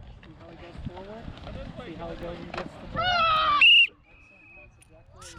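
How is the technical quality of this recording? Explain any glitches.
Quality is compromised by one recurring fault. From 0.53 to 5.07 s there are word clock ticks: an unlocked receiver clock drifts a few tens of ppm, slipping one sample about every half second. This produces roughly ten sharp ticks of uneven strength, seen as thin vertical spectrogram lines and brief waveform spikes.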